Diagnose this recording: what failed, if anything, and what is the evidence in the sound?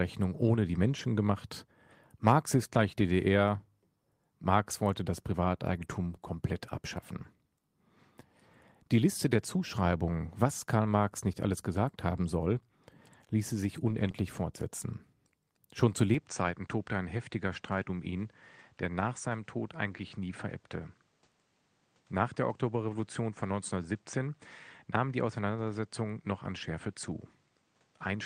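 Rough, noisier stretches at 0.91–1.05, 2.73–2.79, 5.75–6.05 s (between "wollte das" and "komplett abschaffen"), 13.87–14.09 and 22.89–22.95 s. This is a network fault: a lost packet rebuilt from error correction, played from low-bitrate copies.

A brief smear at about 14.11–14.15 s, just after "ließe sich", is short concealed packet loss. Some 20 ms never arrived, and the decoder filled it by extending the preceding sound.

From 16.1 s to the end the sound turns duller, with nothing above 9.3 kHz. It is about 5 dB quieter over a new noise floor roughly 40 dB down, and there is no gap at the change. The capture stage likely had its input switched to a poorer device.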